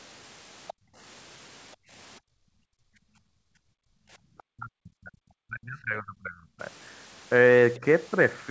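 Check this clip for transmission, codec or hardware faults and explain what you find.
Echo-canceller faults run through this speech clip; the audio stops at 8 kHz, which fits a G.722 call path at 64 kbps.

Other side's voice leaking through: at 0.67–0.73 s and 4.38–4.43 s, brief scraps of a second voice are audible. The first sits roughly 20 dB below the talker; the second is faint, around 35 dB down. These are likely loudspeaker output that the echo canceller failed to fully subtract from the microphone.

Background gated by the echo canceller: the room sound drops away at 0.73–0.97 s, 1.76–1.91 s and 2.2–4.19 s, with dips of about 37, 33 and 38 dB. The suppressor clamps the microphone while far-end audio plays, then releases it, so the ambience gaps and returns.

Speech suppressed in double talk: from 4.47 to 6.6 s the talker's voice is pulled down hard, around 40 dB at its deepest, and a small dip of a few dB follows at 7.79–7.84 s. 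The likely cause is simultaneous talk, which the canceller treated as echo and attenuated along with the near-end speech.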